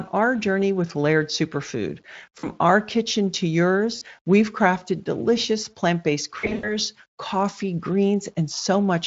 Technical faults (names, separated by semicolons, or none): VoIP packet loss concealed by the speech codec